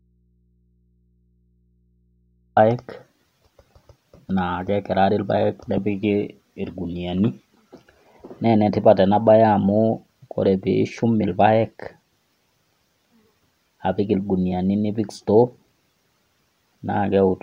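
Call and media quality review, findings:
Audio dropout to a faint residue, already under way at clip start, until 2.57 s. Only mains hum remains, roughly 45 dB down. Likely an upstream break with an open, live input.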